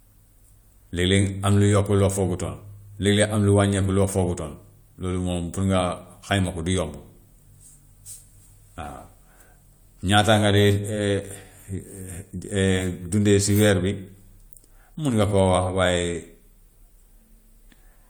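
Speech, and nothing is technically wrong with it, so there are no times or causes to give.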